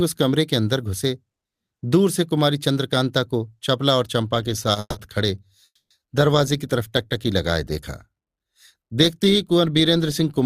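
At 4.80 s the speech halts for about 0.16 s. It returns at 5.65 s for about 0.35 s. Each time, a fading buzz carries the last sound, then goes silent. Speech resumes unbroken, only later. This is call audio freeze, likely from delayed packets emptying the jitter buffer.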